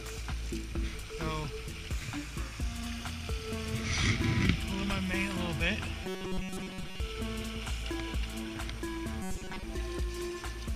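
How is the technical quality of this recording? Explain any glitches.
The recording has two glitches of the same kind, robotic sound from repeated short buffers, from 6.04 to 7.0 s and again from 9.22 to 9.63 s. In both stretches the sound turns into a rigid, metallic buzz at a fixed 188 Hz that only loosely tracks the underlying audio. The likely cause is audio arriving too late, with the software refilling the gap by looping the last fragment of roughly 5 ms. That length matches the 188 Hz buzz, and the fragment seems to repeat for most of each stretch. On a spectrogram these sections show evenly spaced horizontal harmonics at multiples of 188 Hz. The waveform shows a short identical cycle repeating.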